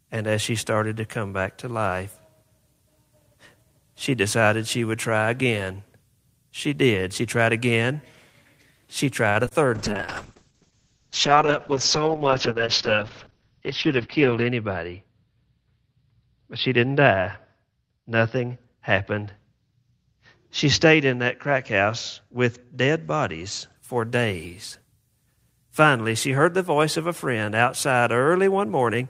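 A short stall from a late packet hits this speech recording at 9.29 to 9.37 s: the jitter buffer ran dry, so the receiver stretched the last sound for 59 ms, then resumed with nothing lost. Short concealed packet loss follows at 9.45 to 9.49 s and 9.49 to 9.53 s, where 20 ms went missing each time and was filled by extending the preceding sound, giving a brief smear. A call bitrate drop runs from 9.76 to 23.82 s, starting just before "for days". The Opus encoder fell from 32 to 7 kbps, bottoming out for about 4.8 s, and the audio bandwidth shrank from 20 kHz to 6 kHz, so the sound turns coarse and muffled. A jitter buffer speed-up at 13.34 to 13.61 s plays at 113% speed: roughly 50 ms of pitch periods were cut out to reduce delay, which hurries the speech without changing its pitch.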